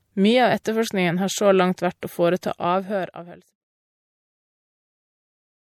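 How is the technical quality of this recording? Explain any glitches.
The recording carries plainly audible codec damage from start to end, most likely MP3 compression. The level eases away smoothly from about 2 s to 3.65 s, with no click or hard edge.

Throughout the speech, nothing sounds above about 17.2 kHz, and weak detail flickers in and out, giving a watery, swirly texture with metallic chirps on s sounds and softened attacks. This happens because the encoder drops treble and zeroes quiet frequency lines frame by frame when bits run short, which fits a low bitrate around 64 kbps. A simple low-pass filter would dull the top without this shifting, chirpy churn.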